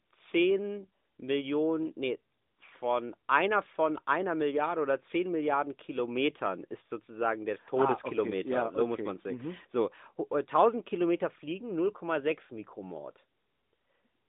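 Nothing here counts as a technical fault, so there's really nothing to flag as the speech runs along.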